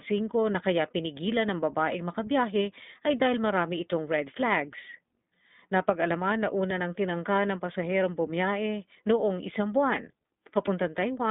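The whole clip runs through the iLBC codec: speech is cut to roughly 150 Hz–3.7 kHz with nothing above 3.8 kHz, and the coding roughness is plainly synthetic, consistent with the 20 ms, 15.2 kbps mode.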